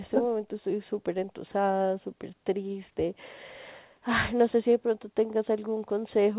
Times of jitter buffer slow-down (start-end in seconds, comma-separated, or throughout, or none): none